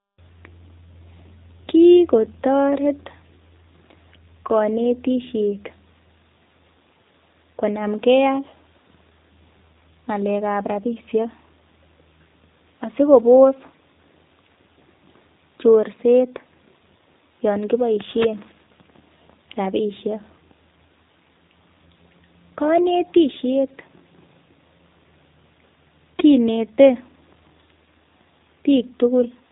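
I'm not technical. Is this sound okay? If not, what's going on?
No, not quite. From start to finish, the speech has been squeezed through the G.729 codec, a very economical format made for internet phone calls. Rather than keeping the actual sound, it rebuilds each tiny slice of the voice from a rough model of how speech is produced, and throws away everything above about 4 kHz. The result is clearly audible: muffled, slightly buzzy and a bit artificial, like a cheap phone line, though still understandable.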